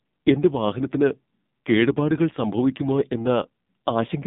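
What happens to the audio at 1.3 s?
At 1.3 s the speech is passing through the AMR narrowband mobile codec, which is active across the whole clip rather than only at that moment. The codec rebuilds the voice from a simple vocal-tract model driven by sparse pulses, so the speech sounds buzzy and synthetic, which fits a low bitrate near 5.9 kbps. On a spectrogram, energy sits between 150 Hz and 3.7 kHz, with a hard empty ceiling above 3.8 kHz.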